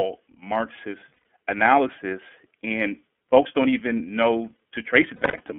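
The whole speech clip passes through the iLBC codec. The band stops near 3.4 kHz and thins below about 200 Hz, and the voice has a plainly audible rough, slightly synthetic grain, which fits iLBC's 30 ms mode at about 13.3 kbps. Unlike a plain telephone band-limit, the harshness sits in the excitation itself, not just in the missing highs.

At 1.14 s, lost iLBC frames leave a gap of about 120 ms, ending near 1.24 s. That points to four lost 30 ms frames. The decoder fills the hole by repeating the last pitch cycle with added noise, so it sounds like a briefly held, buzzy vowel rather than silence or a click.

From 5.16 to 5.41 s a second burst of lost frames is scattered over about 240 ms, totalling roughly 180 ms, with the longest run around a tenth of a second.

What separates these from the concealment of a predictive codec is the recovery. Because each iLBC frame decodes independently, the voice is right again almost at once after each gap, with no lingering smear.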